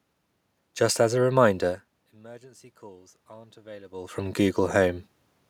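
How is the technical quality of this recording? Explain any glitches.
One glitch stands out. Automatic gain rising from 2.19 to 5.02 s, just after "as a reminder": the input fell by about 24 dB, so the gain control slowly added about 6 dB, swelling voice and room noise together. The level shifts near 1.5 s and 4 s come from the talker moving relative to the microphone.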